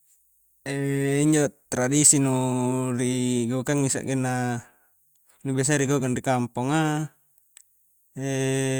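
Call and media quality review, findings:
No faults found in the speech audio.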